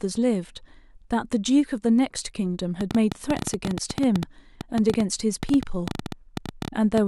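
Likely interference from nearby equipment produces a train of clicks from 2.81 to 6.99 s: around forty uneven ticks, nearly ten per second, standing well above the speech.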